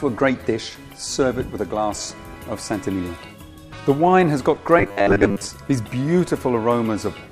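A rigid, metallic buzz locked at 100 Hz appears in the audio from 4.79 to 5.47 s, only loosely following its contour. This robotic sound from repeated short buffers is likely due to audio arriving too late, with roughly 10 ms chunks replayed to fill most of that span.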